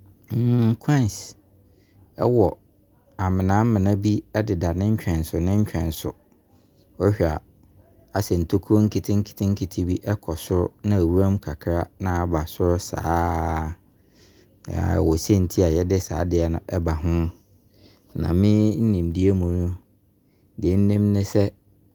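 A speech recording with no audible technical faults.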